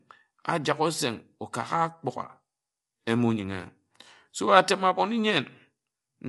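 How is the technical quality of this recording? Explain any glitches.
The recording carries plainly audible coding damage from start to finish, and the speech sounds rough and grainy throughout. The damage is consistent with low-delay AAC compression, likely AAC-ELD at a rate that fits around 32 kbps. That codec works in very short frames, so it cannot separate closely spaced voice harmonics cleanly, and at this rate it runs short of bits. On a spectrogram, the harmonic stripes look smeared, with noisy fill between them, and all energy stops sharply at about 11.6 kHz.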